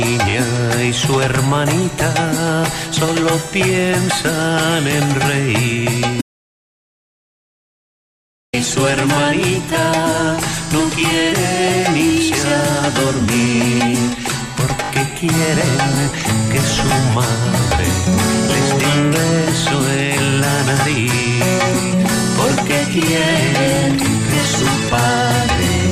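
At 0.30 to 0.34 s a short stutter is heard: a repeated buffer, where a 20 ms slice of sound plays two extra times with a hard join at each repeat. Fresh audio arrived late, so the device replayed its last buffer, and nothing is lost.

From 6.21 to 8.53 s the sound cuts out to silence with no room tone, then resumes mid-flow. This audio dropout to silence erases 2.32 s of material, likely because the input link failed while silence continued to be written.

The same repeated-buffer stutter returns at 14.84 to 14.90 s, where the 20 ms slice plays three extra times, and at 23.76 to 23.78 s, where it plays once more.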